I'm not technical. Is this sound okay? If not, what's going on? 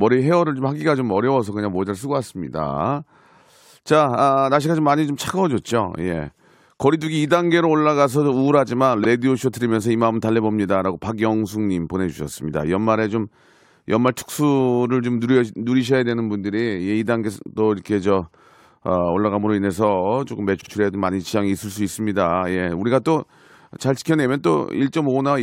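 No, there are two small glitches called repeated frames. Around 9.03 to 9.05 s, a tiny slice of about 26 ms plays twice, a quick stutter. Around 20.60 to 20.70 s, a slice twice as big, about 52 ms, plays three times in a row, which adds about a tenth of a second. That points to chunks of the compressed file being written or sent more than once.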